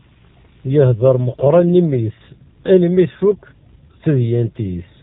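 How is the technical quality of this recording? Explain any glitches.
The quality is poor throughout. The AMR narrowband mobile codec is plainly audible from start to finish. It cuts everything above 4 kHz and models speech from sparse pulses. The voice sounds muffled, buzzy and synthetic, which fits a low mode around 7.4 kbps.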